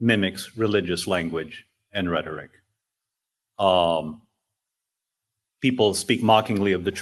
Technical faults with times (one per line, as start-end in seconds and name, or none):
none